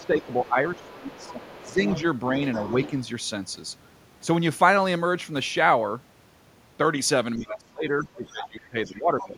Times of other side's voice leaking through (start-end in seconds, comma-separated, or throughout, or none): 0.00-2.02, 2.53-3.04, 7.49-7.59, 8.42-8.49, 8.85-9.27